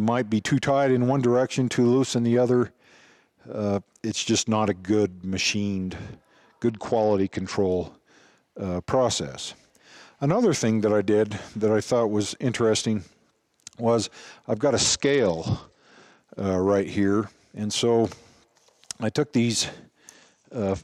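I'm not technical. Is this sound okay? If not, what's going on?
No. Three times the wireless link got crowded, and the phone responded with a Bluetooth SBC bit pool drop: it cut how much detail it sent so the audio would keep playing. With so little to work with, the highest frequencies are thrown away and the rest is stored roughly. You hear the sound go dull and gritty from 6.70 to 7.53 s, from 14.75 to 16.20 s, and from 20.14 s to the end.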